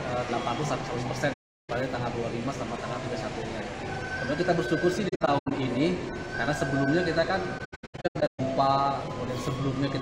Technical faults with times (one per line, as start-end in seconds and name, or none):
1.33-1.70 AAC frame loss with muting
5.08-5.52 AAC frame loss with muting
7.58-8.40 AAC frame loss with muting